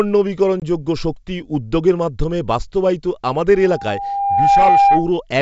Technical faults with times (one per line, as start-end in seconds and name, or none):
0.60-0.63 packet loss on an ADPCM call
3.54-5.14 loudspeaker feedback squeal